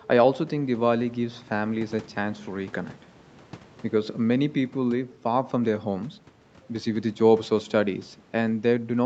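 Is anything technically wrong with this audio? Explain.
No, nothing is wrong: the speech carries the normal imprint of a call path, with the bass trimmed by the microphone processing and nothing above 8 kHz, consistent with an Opus link set to wideband.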